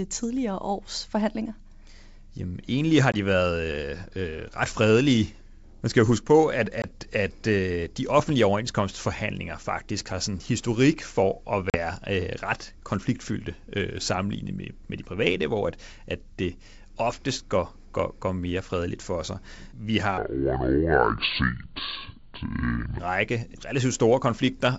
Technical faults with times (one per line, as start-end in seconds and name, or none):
3.12-3.16 packet loss on an ADPCM call
6.82-6.85 packet loss on an ADPCM call
8.19-8.31 loud pop
11.70-11.77 packet loss on an ADPCM call
20.18-22.99 section at the wrong speed